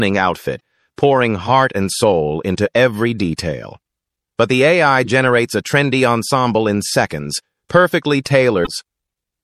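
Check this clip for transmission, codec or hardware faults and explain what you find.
Two kinds of fault are present. Throughout, the sound is watery and swirly, plainly audible. This is likely MP3 compression at a low bitrate, fitting roughly 64 kbps. Weak frequency lines switch on and off between frames.

Damaged data in a compressed stream occurs at 0.56–0.60 s, 5.05–5.07 s and 8.64–8.68 s. Corrupted frames make the decoder lose sync, causing brief chirps or blips.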